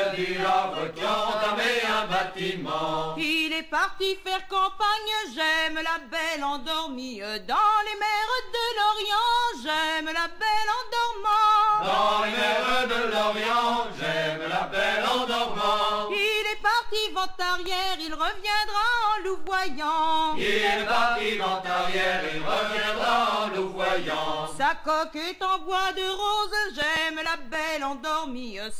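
CD scratch ticks, 26.68 to 27.69 s: eight brief clicks, each a few milliseconds at most, one per disc turn where a scratch defeats error correction.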